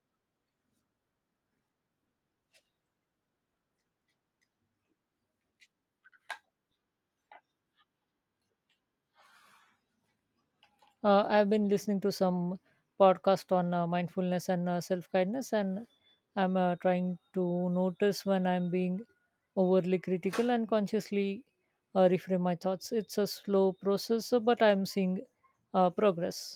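Listening closely to the recording turned up nothing that stood out as a technical problem at any point.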